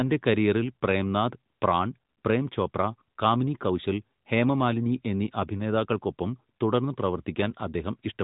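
Listening closely to the speech, with its band limited to the narrowband mobile codec's 4 kHz ceiling, nothing stood out as a fault at any point.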